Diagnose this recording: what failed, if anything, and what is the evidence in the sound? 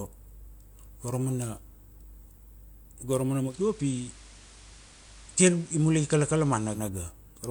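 Digital radio blending to analogue, at the receiver: just after "go ra mana", at 3.43 s, a 125 ms cross-fade drops the speech onto the FM broadcast until 6.84 s. A spectrogram shows a hiss floor roughly 25 dB down, with the waveform level unchanged.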